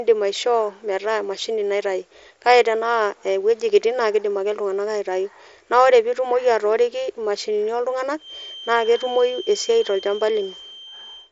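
A feedback whistle enters at 8.16 s, just after "pitumoki atooriki imashini", and continues to the end at 11.31 s: a thin, steady tone at 3.1 kHz, sitting well below the speech in level and wavering slightly. It is likely caused by the loudspeaker-to-microphone loop hovering at the edge of instability, so one frequency keeps ringing without building up. The band-limited sound, with nothing above about 7.7 kHz, fits a wideband Bluetooth headset link.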